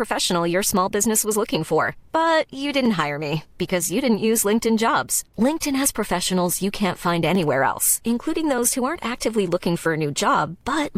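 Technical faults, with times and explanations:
2.86 s and 7.35 s: block of digital silence. In the speech, a gap of about 0.73 ms drops abruptly to silence and back with no fade, which fits a 32-sample block left unfilled. Each hole is too short to hear as a gap, so it comes across as a single tick.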